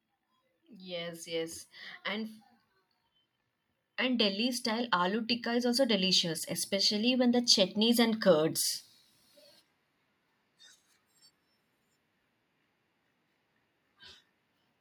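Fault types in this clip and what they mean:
Automatic gain rising: The gain control judged the input too quiet and pushed its level up. It did this slowly, not in a jump. Between 3.83 and 8.63 s the whole recording grows louder by about 10 dB. The speech and the background noise swell together, since the gain acts on everything at once. The rise takes almost five seconds. That slow ramp is what marks an automatic gain change.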